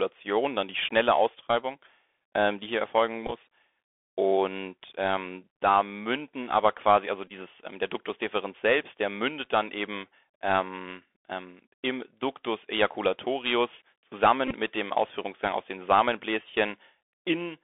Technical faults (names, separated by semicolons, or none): Bluetooth CVSD headset codec; Bluetooth headset packet repeated